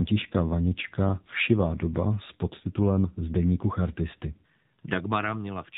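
From start to finish the speech sounds buzzy and synthetic, boxed into a telephone band with nothing above 4 kHz, and the damage is plainly audible. This is AMR narrowband mobile codec coding: AMR-NB rebuilds each 20 ms frame from a vocal-tract filter fed by a handful of pulses, which suits speech only roughly. The strength of the buzz points to one of its lower modes, around 7.4 kbps.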